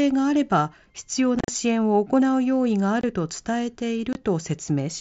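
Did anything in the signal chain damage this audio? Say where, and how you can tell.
Yes. The damage happened on the wireless link between headset and phone. It is unconcealed Bluetooth headset packet loss. From 1.39 to 1.48 s the speech breaks into rough, chopped fragments, with about 75 ms missing across 90 ms. The longest gap is 37.5 ms. Shorter holes fall at 3.01 to 3.04 s and 4.13 to 4.15 s, each 22.5 ms, which fits three lost 7.5 ms mSBC frames. Silence or an idle pattern filled each lost packet with no concealment, so every hole starts and stops abruptly.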